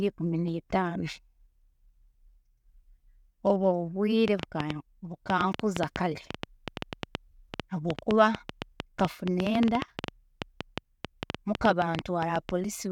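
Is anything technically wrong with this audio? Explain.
Yes. From 4.28 to 12.50 s, likely interference injects a train of clicks, about seven uneven pulses a second, popping well above the speech and pauses.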